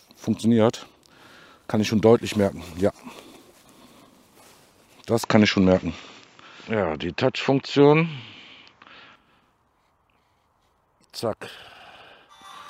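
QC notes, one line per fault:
5.23 to 9.16 s, input switched to a poorer device: the audio abruptly loses its top end, with nothing above 7.6 kHz, and takes on a different tone, a level shift of about 5 dB and a new noise floor about 55 dB below the signal, with no silence at either switch. The cause is likely a change of capture device mid-recording. On a spectrogram the upper band goes dark at a hard ceiling for that span. The waveform steps in level at both boundaries.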